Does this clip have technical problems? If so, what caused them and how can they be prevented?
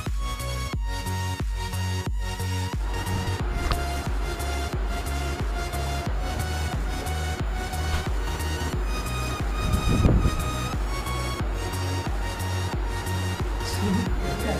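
Yes, there's a USB whine running through the whole clip, a steady fixed-pitch tone built on 1 kHz, with its strongest harmonic at 7 kHz, sitting roughly 30 dB under the sound. It comes from the USB bus pulling current in 1 ms frames, and that rhythmic draw leaks into the audio through shared power or ground, giving a 1 kHz comb. Next time, power the interface separately or use an isolated hub and keep ground paths clean.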